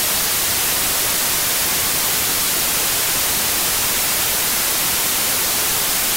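The whole thing is buried under loud, harsh broadband noise from start to finish, the classic sign of samples built from the wrong bytes: the reader's misassembling each sample, so the jittery low bits land in the high positions and swamp everything.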